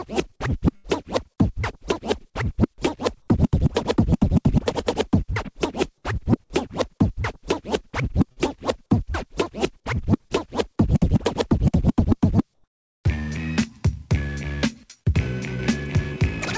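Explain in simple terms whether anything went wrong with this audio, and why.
A few things went wrong, typical of a call connection dropping or pausing bits of data.

Right near the start, from 0.76 to 0.86 s, there's a burst of packet loss. A chunk of audio never arrived, so the receiver stretched out the last bit of sound and faded it down for about 80 ms. Then playback jumps ahead, and roughly 80 ms of the real audio is simply gone.

Later come two smaller hiccups, each a short concealed packet loss: one at 8.32 to 8.38 s, where about 40 ms went missing, and one at 10.28 to 10.32 s, about 20 ms. The receiver patched each gap by continuing the previous sound and blending back in, so you hear a quick smear or wobble rather than a hole.

From 12.54 to 13.04 s, the real background gets replaced with comfort noise for half a second. It sounds like a flat, featureless hiss, a bit quieter than the room sound around it. 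The likely cause is the sending side going quiet because it thought nothing worth sending was there, with the receiver filling in synthetic noise until real audio resumed.

The whole clip also went through a call codec that cuts everything above 8 kHz, so it has that slightly dull phone-line top end throughout.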